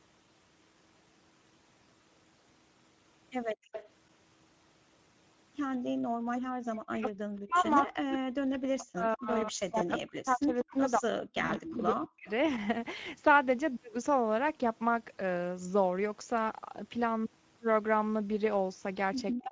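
Speech carrying a plainly audible Speex codec coloration throughout: the voice sounds hoarse and grainy, the way a CELP coder sounds when too few bits go to the excitation. The damage points to a middle-rate setting around 16.8 kbps, and the band stops at 8 kHz. Faint delayed copies of the voice, about 15 to 20 dB below the speech and trailing it by 192 ms, come through at 3.49 to 3.89 s, 7.66 to 7.70 s, 9.13 to 9.45 s and 10.63 to 12.3 s. This is likely echo leak, with the far end's loudspeaker sound getting past an echo canceller that did not fully remove it. The room background drops out sharply, by about 39 dB, from 3.55 to 3.72 s and from 5.84 to 6.61 s, then returns. That is background gated by the echo canceller, which clamped the microphone while the loudspeaker played. From 6.89 to 12.28 s the talker's own voice repeatedly sinks or cuts out in pieces, by as much as roughly 40 dB over about four seconds in total, and it dips again briefly from 19.32 s to the end. 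This is likely speech suppressed in double talk, with the canceller turning everything down while both sides spoke. At 11.45 to 11.51 s a 40 ms stretch smears into a fading, stretched sound, which is VoIP packet loss concealed by the speech codec. The gap fits two lost frames, and the voice stays weakened for a moment after the stream recovers.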